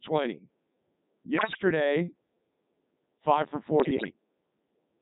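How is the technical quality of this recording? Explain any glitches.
Quality is poor: the speech runs through the Codec 2 vocoder for the whole clip, with two bursts of bit errors on digital voice radio.

The speech sounds robotic and buzzy throughout, and it is coded at 3.2 kbit/s. The decoder rebuilds the voice from sine waves using only sent pitch, voicing and envelope, so the damage is steady, unlike bursty dropouts.

From 1.38 to 1.62 s, and again from 3.80 to 4.10 s just after "five for", the voice warbles and bleeps, jumping in pitch and level. Flipped bits, at a rate of a few percent, corrupt the parameters of whole frames. This sounds like synthetic gibberish rather than silence or clicks.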